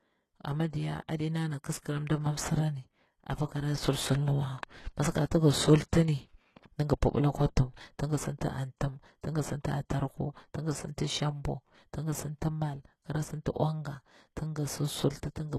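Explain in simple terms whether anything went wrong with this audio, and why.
Something did go wrong, and it lasts the whole recording. The speech has a gritty, plainly metallic edge, and s sounds come out lispy. Nothing at all is left above about 12.3 kHz. This points to likely HE-AAC compression at a low data rate. That codec keeps only the lower frequencies and fakes the treble by copying lower parts upward, so the top end doesn't match the rest of the speech.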